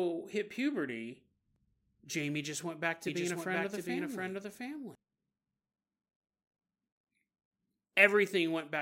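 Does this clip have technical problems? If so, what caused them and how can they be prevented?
Yes. From 3.07 to 4.95 s a doubled audio track appears: a dry full-band copy of the speech, about 5 dB quieter, trails roughly 0.7 s behind, likely from a second, slower capture path mixed in. A spectrogram shows each pattern repeated, offset, switching on and off abruptly. Prevent it by routing the source through only one capture path.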